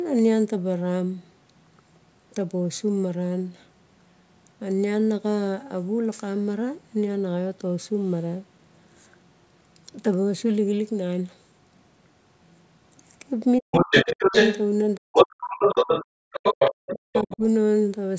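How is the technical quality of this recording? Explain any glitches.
The last few seconds have trouble, all in one stretch where two people seem to talk over each other.

Speech suppressed in double talk, at 13.59–14.34 s, 14.97–15.98 s and 16.91–17.42 s: the voice dips very deeply, likely an echo canceller clamping down when both sides spoke at once.

The other side's voice leaking through, at 13.72–14.68 s and 15.14–17.37 s: a second voice comes in about 5 dB louder than the talker's own level, likely left over from loudspeaker echo the canceller didn't fully remove.

Background gated by the echo canceller, at 16.26–16.31 s: the room sound drops by about 40 dB for a moment as the canceller pulls the mic down, then comes back.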